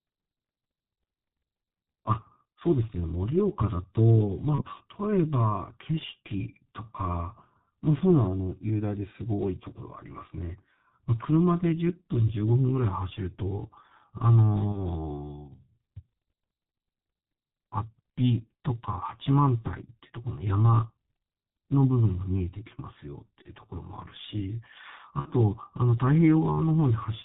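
G.723.1 codec damage runs through the whole of this speech recording: everything above 4 kHz is missing, consonants smear, and the voice turns muffled and hoarse, a heavy coarseness that points to a rate of about 6.3 kbit/s, where the vocal-tract model updates only every 30 ms. VoIP packet loss concealed by the speech codec occurs at 4.55–4.63 s, 14.72–14.87 s, 23.42–23.50 s and 25.19–25.28 s. In each gap the decoder repeats its last pitch and filter with falling gain, producing a brief buzzy tone or coloured noise that fades. The final event sounds like two consecutive lost 30 ms frames, and the voice stays weakened for a moment after each gap.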